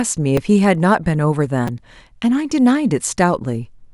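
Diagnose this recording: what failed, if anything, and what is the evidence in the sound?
Two brief clicks with a buzzy edge break into the speech, one at 0.37 s and a slightly longer one at 1.68 s. This is a repeated buffer at the driver or buffer stage. Fresh audio missed its deadline, so the device replayed the last block of about 5.3 ms, which fits a 256-sample buffer. It replayed once at 0.37 s and twice at 1.68 s, with a hard join at each repeat. Around 5 ms and 10 ms of real audio were lost.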